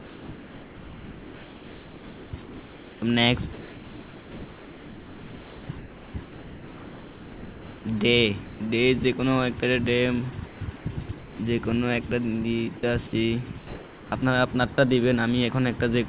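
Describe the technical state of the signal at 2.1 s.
At 2.1 s the signal is still inside a stretch from 0.0 to 2.33 s where sound is dropped by the voice detector, likely because the sender's detector treated real sound as background and stopped transmitting. Roughly a second of actual sound is missing, replaced by flat noise.

The same moment also falls within comfort noise in place of the background, running from 0.0 to 3.02 s. The genuine ambience has likely been swapped for receiver-generated synthetic noise during the transmission pause. It sounds steady and featureless, lacking the texture of a real room. This differs from a noise gate, which would leave near silence rather than a constant hiss. Throughout, nothing is present above 4 kHz, consistent with narrowband telephone coding.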